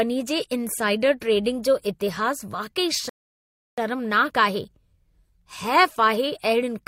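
A rebuffering stall interrupts this speech clip: the player exhausted its downloaded audio and had to halt playback until more data arrived. From 3.09 s to 3.78 s the speech drops abruptly into silence, then picks up again at exactly the point where it broke off. No speech is skipped or repeated, but the pause inserts about 0.68 s of dead air, stretching the clip and breaking the natural pacing mid-flow.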